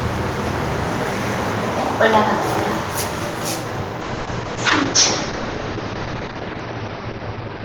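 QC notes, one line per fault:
4.03 s to end, call bitrate drop: the sound turns rough and watery and loses its top end above 6 kHz, where it previously reached 20 kHz, for the last 3.1 s. The coarser coding fits the encoder being cut from 32 kbps to 8 kbps.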